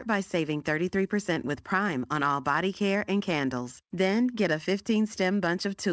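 At 1.34 to 1.38 s, short concealed packet loss: about 20 ms never reached the decoder and was patched from the preceding speech, leaving a brief smear.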